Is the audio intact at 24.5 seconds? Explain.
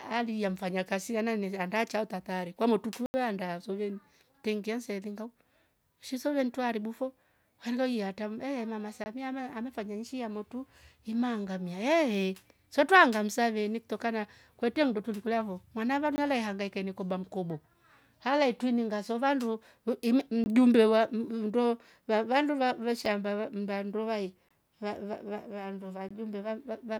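No. The speech drops out for a block of digital silence from about 24.49 to 24.51 s, a gap of 20 ms. Here a run of samples was replaced by silence, most likely because the output buffer was not filled in time. The level falls straight to nothing and jumps back with no fade. At this length it comes across as a brief hole in the speech.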